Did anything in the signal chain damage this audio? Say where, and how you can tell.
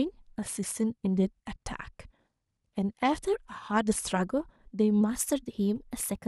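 Yes. At 5.01 s the speech suddenly speeds up by about 6.4% and rises about 107 cents, roughly a semitone, and it stays that way to the end of the clip. Pitch and tempo move together, so this is a rate change, not a pitch effect. It's likely a drift correction step at the driver or buffer stage, where clock-matching software changed the playback rate in one jump to drain or refill its buffer.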